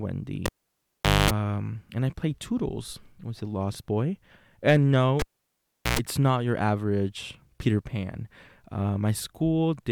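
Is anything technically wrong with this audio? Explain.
Yes. At 0.46 to 1.31 s, and again at 5.19 to 5.99 s just after "a lost boy and", the speech pops, drops to near silence for about 0.8 s and 0.74 s, buzzes at 50 Hz then 60 Hz (233 ms, 111 ms), and pops back. This is a cable pulled and plugged in: the live connector is removed, and reinserted with only its tip touching first, which picks up mains hum.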